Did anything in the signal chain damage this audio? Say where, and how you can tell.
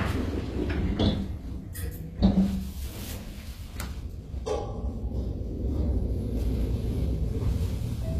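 Yes, at the codec stage, throughout. The treble sounds bright yet gritty and metallic, with nothing above 14.9 kHz. The likely cause is HE-AAC compression near 24 kbps, which rebuilds upper bands from copied lower ones. Plain low-pass filtering would sound dull instead.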